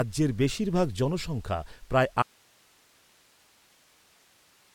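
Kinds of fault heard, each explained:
Audio dropout to a faint residue: at 2.23 s, right after "বেশিরভাগ জনসংখ্যা প্রায়", the speech cuts off abruptly and only hiss remains, roughly 35 dB below the speech level, until the end. The source feed was likely lost while the path after the break stayed live.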